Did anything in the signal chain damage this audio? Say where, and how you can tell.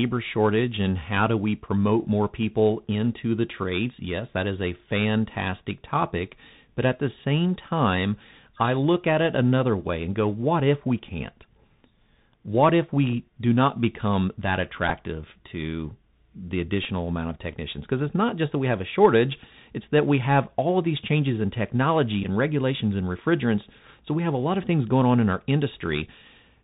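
Yes. The codec stage damaged it throughout. The speech is narrowband, with nothing above 4 kHz. S sounds turn scratchy, and a granular hiss sits underneath. This is the Bluetooth CVSD headset codec, which fits a 64 kbps one-bit stream whose adapting step can't keep up with loud, high sounds.

Three Bluetooth headset packet repeat events come from the radio link. They fall at 14.89 to 14.92 s, after "do not become that", at 16.84 s, after "to the", and at 22.23 to 22.26 s, after "these changes in technology". Each one is a brief steady buzz near 267 Hz. The chip re-decoded the last good packet, and about 11 ms or 7.5 ms of lost audio fits runs of 3.75 ms packets.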